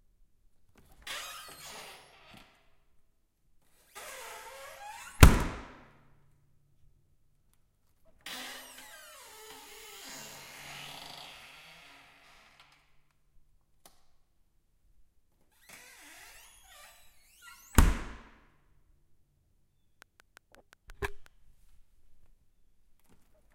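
From 20.02 to 21.27 s, a train of clicks runs over the sound. About seven similar pulses arrive at a steady 5.6 per second, a few decibels louder than the audio. It sounds like regular ticking. Electrical interference or a faulty connection is the likely cause.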